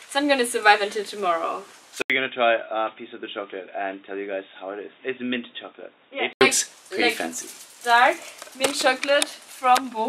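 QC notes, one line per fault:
2.02–6.41 s, input switched to a poorer device: after an 80 ms gap the sound turns dull and boxy, with nothing above 3.8 kHz. It drops roughly 10 dB with fresh background noise about 40 dB down, likely from a narrower-band microphone briefly taking over.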